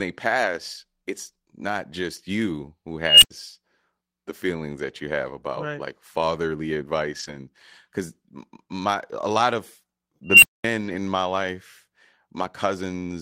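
Unstable filter faults hit this speech recording twice, at 3.03 to 3.31 s just after "not just you who" and at 10.25 to 10.64 s after "my a lot of". Each time a squeal around 3 kHz swells over roughly 0.19 s and 0.18 s respectively, clips, and then drops to silence for about 0.09 s and 0.22 s. The rising tone and the dropout come from a recursive filter with bad coefficients whose output feeds back and grows until it overflows and resets. A lost packet rebuilt from error correction is heard at 7.19 to 7.37 s, between "about right like fatherly" and "because my a lot", and again at 10.81 to 10.95 s. There is no gap, but about 100 ms and 80 ms of audio respectively sound rougher and noisier. Those stretches were played from the low-bitrate backup copies carried in the following packets after the originals went missing.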